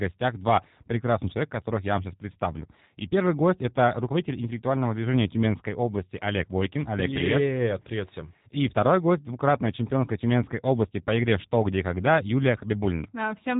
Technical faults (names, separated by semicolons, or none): G.729 codec